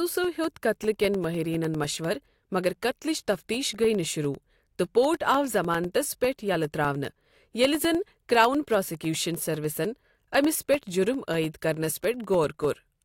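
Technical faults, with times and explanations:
0.14–12.95 s, periodic USB or driver dropouts: a recurring bus or driver stall blanks about a millisecond to silence every 0.1 s, heard as steady ticks through the speech.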